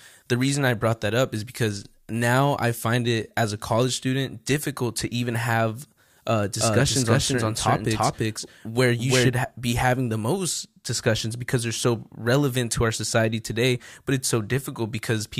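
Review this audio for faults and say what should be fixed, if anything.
From 6.61 to 9.29 s a doubled audio track appears: a full-band copy about as loud as the original trails it by roughly a third of a second, likely from a second, slower capture path. Unlike room echo, it has no decay and starts and stops abruptly. Route each source through only one capture path and check edits for overlapping copies.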